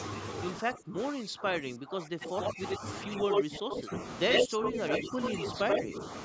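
From 0.59 to 2.84 s the speech repeatedly dips, by around 20 dB at its deepest, and is likely speech suppressed in double talk. On the waveform this shows as shrunken, gated stretches. From 2.21 to 2.77 s a copy of the voice trails it by 88 ms, about as loud as the speech itself. This is likely echo leak, and the spectrogram shows onsets doubled and smeared sideways. The same 88 ms echo returns from 3.12 to 3.82 s, slightly louder than the speech, likely leaking back again. Overlapping it, from 3.24 to 3.91 s, the voice is pulled down by around 15 dB in likely double-talk suppression, leaving hollowed-out bands in the spectrogram. From 4.29 to 6.05 s the delayed copy, likely echo leak once more, stays slightly above the speech level. Within that stretch there are shallower dips of around 10 dB from 4.44 to 5.20 s and from 5.52 to 6.01 s, likely further double-talk suppression, which appear as brief notches in the waveform envelope.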